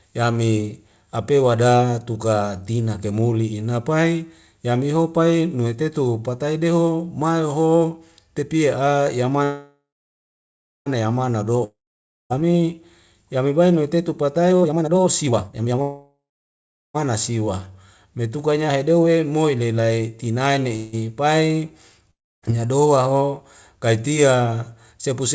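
From 9.44 to 10.88 s the speech stops and a fading buzz takes over, then about 1.0 s of silence. This is a call audio freeze, likely from held-up packets draining the jitter buffer. On a spectrogram it appears as smeared last-frame energy, then a blank band, before the speech resumes with nothing missing.

From 11.64 to 12.32 s comes a long network dropout, likely from lost packets. A short hiss dies to about 0.55 s of silence, and about 0.66 s of speech never returns. The waveform shows a decaying tail, then a flat line.

From 14.49 to 15.81 s a jitter buffer speed-up plays the speech at about 184% of its normal rate, cutting roughly a second of audio. Pitch stays put, but the pitch periods are spliced out repeatedly, so syllables crowd together on the spectrogram.

A second freeze follows at 15.82 to 16.96 s, before "siwa metukanya hedeu he". It has a fading tail and about 0.73 s of silence.

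A third freeze runs from 20.76 to 20.95 s, just after "moi ni lai tinae". It is only a brief buzzy stretch with no silent part, visible as a short smear of repeated spectrum.

From 22.11 to 22.44 s a second dropout leaves about 0.27 s of silence, and about 0.42 s of audio is lost.

Throughout the clip the spectrum stops at 8 kHz, which fits G.722 at 64 kbps.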